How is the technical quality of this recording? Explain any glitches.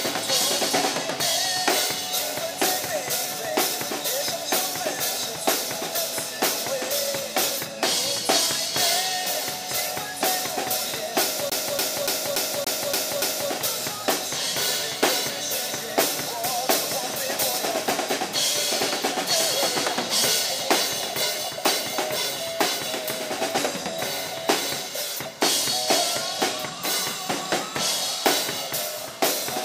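The recording has one glitch, a CD stuck on one turn. From 11.5 to 13.5 s, one 287 ms slice repeats seven times. A scratch keeps bouncing the laser back a track, producing a fast, even stutter with brief mutes.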